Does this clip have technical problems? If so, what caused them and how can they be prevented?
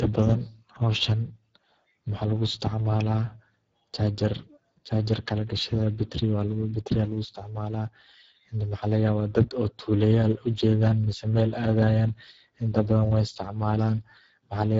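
Yes. Speex codec damage is audible throughout. Too few bits for the CELP excitation make the speech hoarse and noisy, which fits a bitrate near 10 kbps. A spectrogram shows a hard ceiling at 7.7 kHz. Prevent it with a higher Speex quality setting or Opus.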